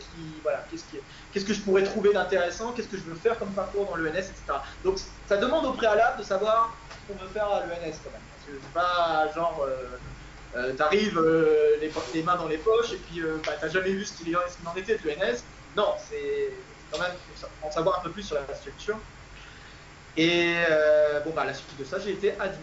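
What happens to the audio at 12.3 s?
Nothing goes wrong at 12.3 s; the audio plays through that moment intact, with no audible fault.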